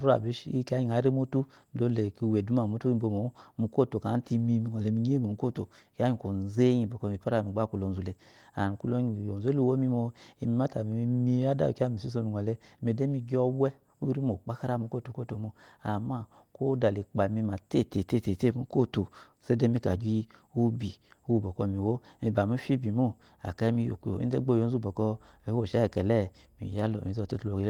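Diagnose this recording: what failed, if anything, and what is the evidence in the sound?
Nothing failed; no faults are audible anywhere.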